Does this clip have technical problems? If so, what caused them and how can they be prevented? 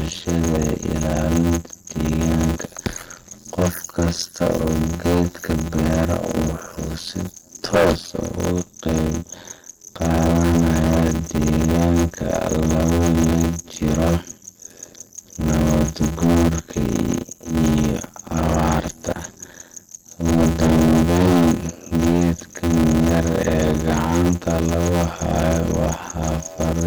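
Yes, three faults run through the whole clip of speech.

Hard clipping: the level is driven about 13 dB past what a stage can pass, so roughly 7 percent of samples are sliced flat at the ceiling. The flattened peaks add high harmonics, heard as a harsh fuzz on every louder syllable rather than occasional crackle. Unlike codec distortion, this grit follows loudness and vanishes in quiet passages. Prevent it by setting gain so peaks stay below full scale, with a limiter before any fixed-range stage.

The sound has a watery, swirling quality, with metallic chirps on s sounds and smeared onsets. The likely cause is MP3 compression at a low bitrate, which fits something near 48 kbps. The encoder starves its frequency lines of bits, so weak ones flicker in and out between frames. The flicker moves with spectral detail, not with level as clipping does. Prevent it by encoding at a higher bitrate or keeping a lossless master.

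Block size mismatch (padded): a steady buzz at 86.1 Hz sits under everything, and the speech runs at 0.625 times normal speed while its pitch stays about right. That pattern fits a stage reading 512-sample blocks that arrive only partly filled, with zeros padding the rest. Each block therefore carries a short silent gap. A wrong sample rate would also slow the audio, but it would lower the pitch and add no buzz. Prevent it by matching block sizes between stages or buffering partial blocks instead of padding them.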